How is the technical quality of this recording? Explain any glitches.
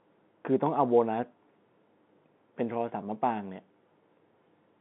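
No glitches here; it sounds like ordinary telephone-band speech.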